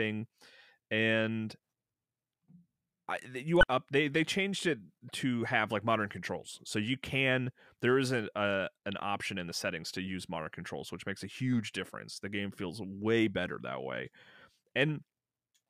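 At 3.60 to 3.63 s, damaged data in a compressed stream produces a brief glitch. The decoder loses sync and resumes at the next good frame.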